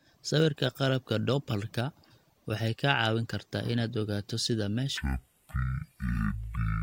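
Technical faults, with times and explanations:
4.97–6.83 s: stereo read as mono. Alternating left and right samples are read as one channel, so the speech drops to half speed and an octave low. A spectrogram shows the harmonics squeezed downward, with a fainter mirrored copy in the upper half.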